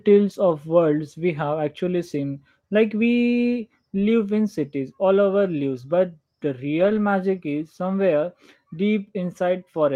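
At 0.49–0.51 s and again at 6.79–6.97 s the speech briefly turns rougher and noisier without ever dropping out, a lost packet rebuilt from error correction. The later stretch spans about 180 ms with about 100 ms rebuilt, which fits several separate packets. The decoder filled each gap with the low-bitrate copy carried in the following packet.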